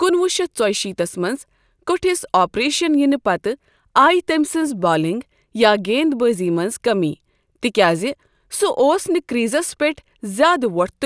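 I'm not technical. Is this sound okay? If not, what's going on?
Yes, this sound is okay, and there's nothing going on with it that needs fixing.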